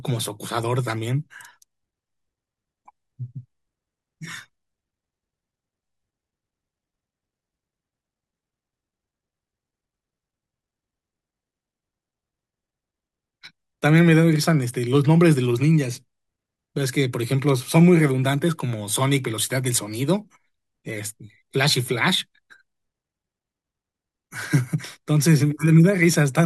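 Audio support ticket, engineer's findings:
Speech signal checked throughout with no audible technical fault found in the recording or its playback path.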